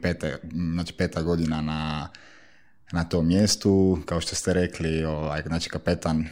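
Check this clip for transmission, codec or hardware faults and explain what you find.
Nothing stood out on listening to this speech recording.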